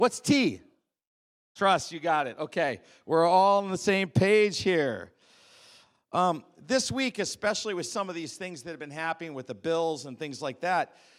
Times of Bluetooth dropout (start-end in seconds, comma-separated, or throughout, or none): none